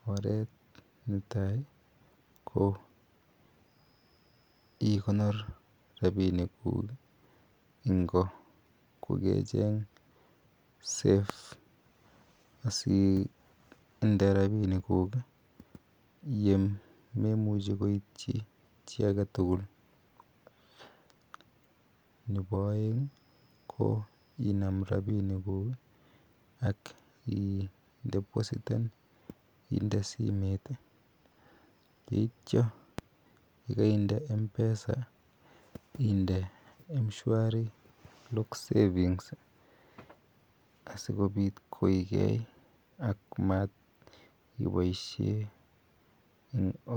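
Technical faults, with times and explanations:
11.30 s and 32.99 s, loud pop: A single sharp pop, about 30 ms long, lands on top of the speech, which carries on beneath it. The first stands roughly 15 dB above the speech, the second roughly 10 dB. Each likely comes from a brief voltage spike, such as static or a switch, shaped by the circuits after it.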